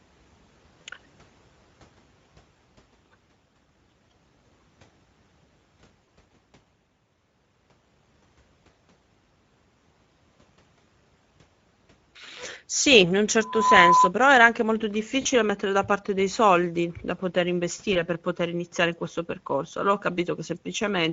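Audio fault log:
throughout, Speex codec: The speech was carried by a low-rate CELP coder, consistent with a setting around 16.8 kbps, that has too few bits for the excitation. The voice sounds plainly noisy and hoarse, and whatever sits above 4 kHz is only a shaped, noise-like fill.
0.81–0.86 s, 4.37 s, 6.04 s, 15.21–15.27 s, 17.93–17.98 s, VoIP packet loss concealed by the speech codec: Packets went missing, about 40 ms at 0.81, 6.04 and 15.21 s and 20 ms at the others. The decoder stretched the last pitch and filter to fill the gaps, lowering the gain frame by frame, leaving the voice weakened for a while after.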